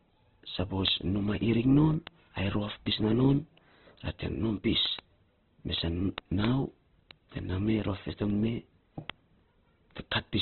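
Throughout, the speech sounds muffled, grainy and rough, with nothing above 4.2 kHz, likely from heavy Opus compression in music mode at a rate near 12 kbps. From 0.22 to 10.29 s, sharp ticks of uneven strength recur about seven times a second. These are word clock ticks: an unlocked receiving clock, off by roughly 150 ppm, drops or repeats a single sample each time.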